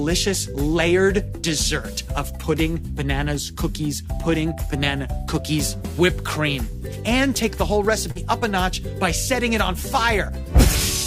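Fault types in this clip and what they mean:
short concealed packet loss: About 40 ms of audio never arrived around 8.11 to 8.18 s, and the receiver extended the preceding sound for 38 ms before blending back. It is a brief smear. The spectrogram shows frozen, repeated texture, and the waveform looks oddly regular.
bit error spike: At 9.41 s a single sample leaps away, as a flipped bit shifts it by a power of two, then returns. It is heard as one sharp tick. The waveform shows a lone spike, and the spectrogram a thin, full-height vertical line.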